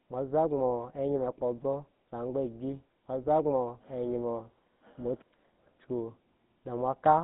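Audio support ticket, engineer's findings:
GSM full-rate codec, throughout. Buzzy, gravelly roughness on the speech, plainly audible; band roughly 150 Hz to 3.7 kHz, nothing above 3.8 kHz. Mechanism: vocal-tract model driven by sparse regular pulses, excitation kept at one sample in three; fits a 13 kbps stream. Unlike plain telephone band-limiting, which only dulls, this adds a grainy buzz to the voicing itself.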